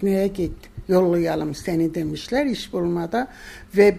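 No technical faults can be heard anywhere in the clip. There is nothing here that needs a timestamp or any further comment.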